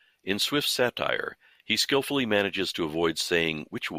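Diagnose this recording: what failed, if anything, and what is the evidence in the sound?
Nothing in the signal chain failed: the speech signal stays continuous and intact, with nothing in the sound pointing to a problem at any stage between capture and playback.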